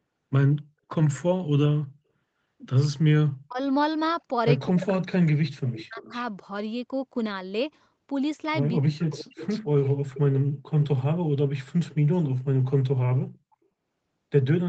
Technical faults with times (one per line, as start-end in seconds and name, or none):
3.44-3.59 speech suppressed in double talk
4.68-6.12 speech suppressed in double talk
5.72-6.22 echo leak
9.10-10.88 echo leak